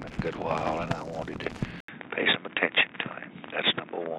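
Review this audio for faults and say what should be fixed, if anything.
At 1.80 s there is an 80 ms silence. From there to the end, everything above 3.8 kHz is gone, so the audio turns dull. Faint new background noise appears. Loudness barely changes. This is likely an input switched to a poorer device. Lock the recording input so it cannot change mid-take.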